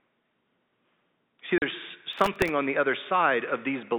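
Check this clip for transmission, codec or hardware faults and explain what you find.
Two faults can be heard in this telephone-band speech, which is limited to about 200 Hz to 3.7 kHz, as G.711 coding would give.

Packet loss filled with silence at 1.58 to 1.62 s: 40 ms of audio vanished, which fits two lost packets, and the receiver played hard-edged silence, leaving a hole.

Processor overload crackle from 2.13 to 2.49 s, just before "on the other": a run of missed sub-millisecond buffer deadlines replayed scraps of old audio, producing gritty tearing over the speech until it clears.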